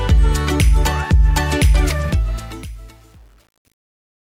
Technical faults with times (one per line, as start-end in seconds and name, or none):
2.05-4.23 truncation distortion on a fade